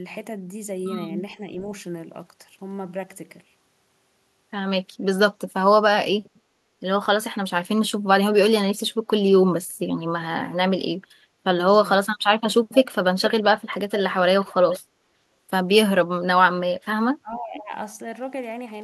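Delayed repeats of the speech, trailing it by 440 ms and sitting roughly 10 to 20 dB below it, appear at 12.72–12.76, 13.25–13.44, 13.9–14.0 and 14.42–14.79 s. This is echo leak, likely from a loudspeaker echo canceller letting residual pickup return. From 17.2 to 17.73 s the speech dips sharply, by around 15 dB. This is speech suppressed in double talk, likely with both sides talking at once so the canceller turns down its own talker along with the echo. A very faint echo scrap also surfaces at 17.36–17.4 s.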